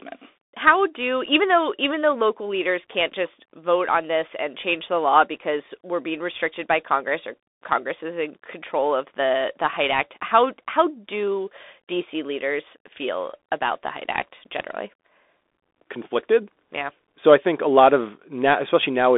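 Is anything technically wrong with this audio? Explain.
Yes. Throughout, it's the Bluetooth CVSD headset codec: one-bit up/down steps track the waveform while the narrowband link caps everything near 3.8 kHz, so sibilants turn scratchy over a granular hiss, consistent with a 64 kbps headset link.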